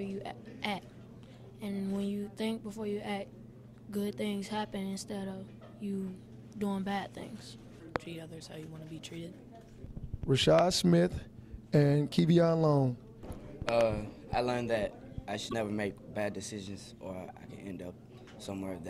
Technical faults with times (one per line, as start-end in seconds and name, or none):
7.96-7.98 loud pop
10.59-10.61 loud pop
13.69-13.83 loud pop
15.45-15.54 damaged data in a compressed stream